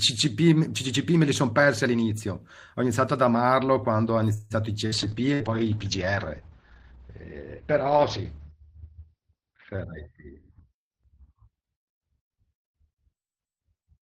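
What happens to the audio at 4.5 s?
From 4.33 to 4.53 s the speech halts in a call audio freeze: the last sound is stretched into a fading buzz or hiss for about 170 ms, never dropping to silence. Packets were likely held up, emptying the jitter buffer; speech then resumes where it stopped, with nothing lost.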